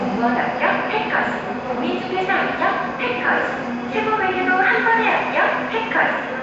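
From start to finish the sound carries a rough, hissy halo and a smeared, underwater blur, most likely Nellymoser compression, the old Flash microphone codec. Its fixed bit budget per 256-sample block leaves weak bands with no bits, so they are filled with noise. The damage is plainly audible and fits a rate near 32 kbps. A spectrogram shows a hard ceiling at 7.7 kHz, with speckled, blocky noise patches where fine detail should be.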